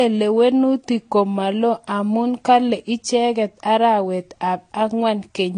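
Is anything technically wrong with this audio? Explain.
Yes. Throughout the speech, nothing above about 9.7 kHz survives, and two distinct kinds of coding artefact sit on top of each other. This is likely transcoding between lossy codecs: a low-rate AAC-LC pass at 32 kbit/s, then a Vorbis pass at a similarly low rate of 39 kbit/s re-encoded that damage and added its own artefacts, while the lowest cut-off in the chain, at 9.7 kHz, remained. A single low-bitrate encode would show one consistent artefact character, not two textures heard together.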